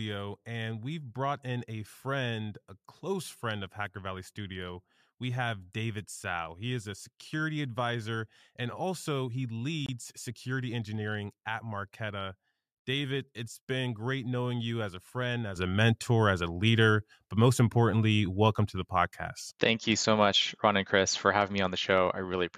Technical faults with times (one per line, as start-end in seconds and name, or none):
15.56-22.57 sudden gain jump